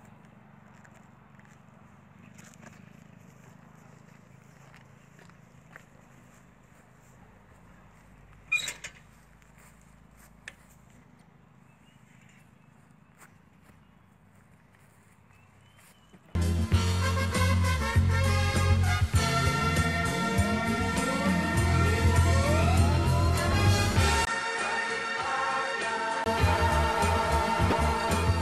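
At 24.25 s, after a 20 ms gap, the sound drops roughly 10 dB, loses everything above 10.5 kHz and gains a new noise floor, likely the input switched to a poorer device, until 26.26 s. From 27.69 to 27.73 s, damaged data in the compressed stream makes the decoder lose frame sync, producing a brief glitch.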